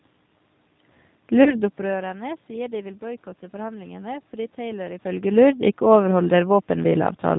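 Throughout the clip, the speech carries the rough, slightly synthetic quality of the G.729 codec, consistent with 8 kbit/s operation. The decoder rebuilds each 10 ms frame from a vocal tract filter, a pitch predictor and a few pulses, so nothing above 4 kHz survives and the damage is plainly audible.

From 1.44 to 1.53 s there is VoIP packet loss concealed by the speech codec. The gap is about 20 ms, which fits a single lost packet. The decoder extrapolated from its last pitch and filter state, producing a brief, fading smear. Because each frame depends on the previous one, the distortion carries on for roughly 90 ms in total.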